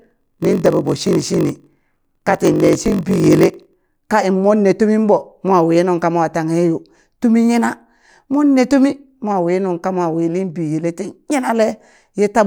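Speech, with a block size mismatch (padded) from the start to 3.74 s. One stage hands over blocks shorter than the next stage reads, and the shortfall is filled with silence, so a brief gap lands in every block. That gives a steady buzz at 46.9 Hz, which fits a 1024-sample read block. The speech is stretched to 0.938 of normal speed, suggesting roughly 960 real samples per block, while the timbre stays.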